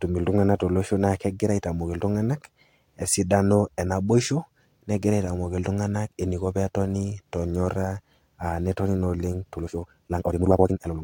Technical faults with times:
9.54-11.04 time-stretched section

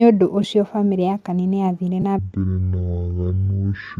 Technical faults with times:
0.42 AAC frame loss with concealment
2.02-2.04 AAC frame loss with concealment
2.19-4.00 section at the wrong speed

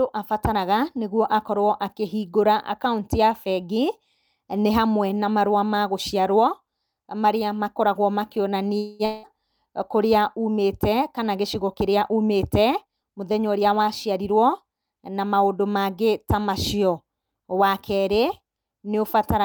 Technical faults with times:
8.77-9.02 call audio freeze
9.05-9.26 long network dropout
12.84-14.32 jitter buffer speed-up

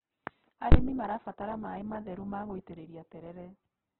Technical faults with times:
0.00-4.00 Opus compression
0.72-0.74 invalid numbers at full scale

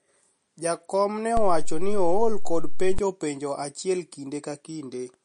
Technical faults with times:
0.00-5.24 MP3 compression
1.37-2.99 DC step

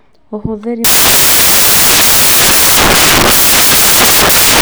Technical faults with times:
0.84-4.61 samples built from the wrong bytes

